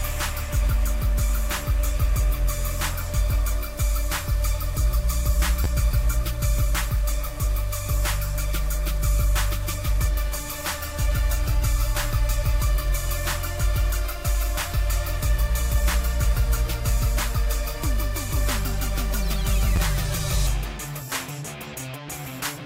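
Two brief stutters interrupt the audio, at 5.64 to 5.67 s and again at 19.76 to 19.78 s. Each is a quick buzzy flutter in which one tiny slice sounds three times in a row, with a hard join at every repeat. This is a repeated buffer: new audio arrived late, so the device replayed its last block twice more. Each slice lasts about 11.6 ms, which fits a 512-sample buffer, and essentially nothing is lost.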